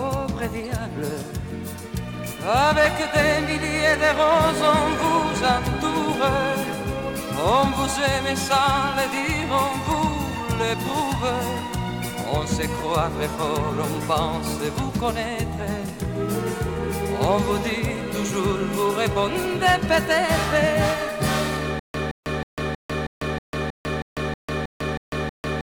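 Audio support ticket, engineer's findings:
Playback stall from 21.79 s to end, likely buffer underrun in player or stream. Stutter with silent gaps: same 169 ms fragment replays 12 times, 318 ms period, 149 ms digital silence between. Intervening audio lost.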